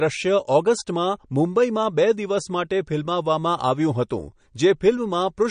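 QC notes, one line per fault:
Throughout, MP3 compression: the speech has nothing above 9.6 kHz and a plainly audible watery, swirling texture, likely from an MP3 encoder short of bits, consistent with a rate around 40 kbps. To save bits, the encoder drops all treble above a fixed cutoff and zeroes the weaker frequency lines. Those lines flicker on and off from frame to frame, producing the unsteady, underwater-like colouring and dulling the top end.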